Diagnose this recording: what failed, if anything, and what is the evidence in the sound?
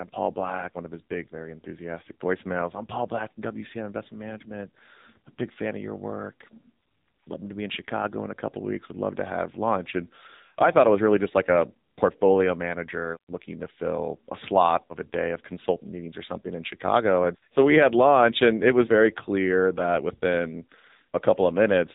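The failure is at the codec stage: AMR narrowband mobile codec damage across the whole speech clip. Nothing passes above 3.8 kHz, and the voice is heavily buzzy and synthetic, which fits a low AMR-NB mode near 6.7 kbps, where too few pulses drive its vocal-tract model.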